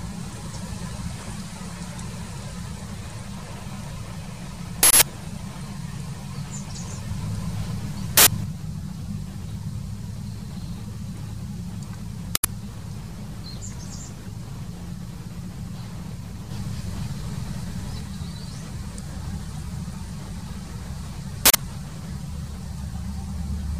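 At 4.83 s, 8.17 s, 12.35 s and 21.46 s, an uninitialised buffer reached the output before audio was written to it, so leftover memory played as samples. Each is a sudden, loud burst of digital noise, first 0.19 s long (fitting an 8192-sample block), then 0.09 s (fitting 4096 samples).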